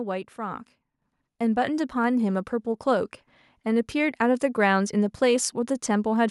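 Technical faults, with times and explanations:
1.02 s, microphone volume stepped up: the speech and background noise jump together by about 6 dB as the input gain is raised in a single step.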